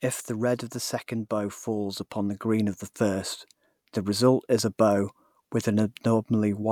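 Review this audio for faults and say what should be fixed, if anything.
Nothing to fix: no faults are audible anywhere in the speech.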